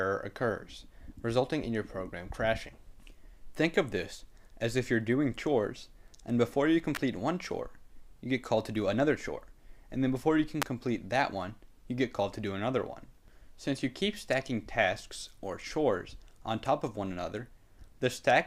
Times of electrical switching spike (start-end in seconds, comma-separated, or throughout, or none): 6.95, 10.62